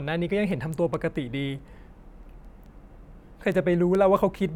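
Sharp ticks run through the speech from 0.30 s to 4.38 s, about five per second, some twenty in all. These are word clock ticks: the receiver runs on its own clock, roughly 100 ppm off the sender's, so one sample slips at each crossing.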